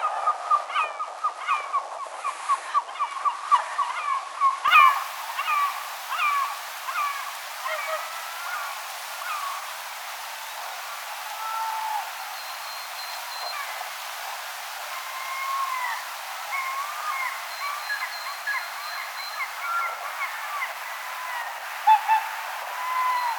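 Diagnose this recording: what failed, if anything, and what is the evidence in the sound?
A steady, thin buzz at 100 Hz with dense harmonics sits about 25 dB below the sound throughout: DECT cordless phone buzz, radio bursts every 10 ms rectified in the analogue wiring.

From 0 to 4.68 s the sound is duller, about 5 dB quieter, cut above 11.4 kHz, with added noise about 30 dB down, then clears with no gap. This is likely an input switched to a poorer device at the driver stage.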